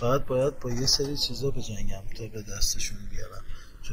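Throughout the speech, the two channels are drifting apart: they appear to come from devices on separate clocks that disagree by something like 150 parts per million, so the delay between left and right slowly grows, reaching under a millisecond by the end. When the channels are combined, that changing offset sets up comb-filter notches that sweep gradually through the spectrum, giving the sound a slow, swirling flanging.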